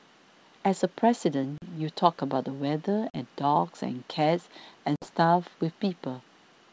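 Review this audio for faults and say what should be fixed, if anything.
Three hard-edged dropouts break the speech at 1.58 to 1.67 s, 3.10 to 3.18 s and 4.96 to 5.07 s, with roughly 40, 40 and 60 ms of audio missing. After each hole the speech resumes slightly distorted before settling. This is packet loss on an ADPCM call: lost packets, consistent with two or three at a time, were filled with silence, so the decoder's adaptive predictor and step size no longer matched the sender's. The G.722 wideband coding at 64 kbit/s underneath sounds clean. Adding a jitter buffer with packet loss concealment and resetting the decoder state after a gap would prevent it.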